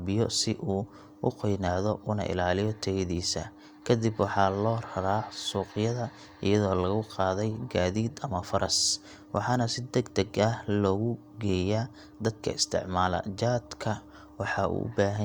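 No technical faults can be heard anywhere in the recording; the signal holds steady throughout.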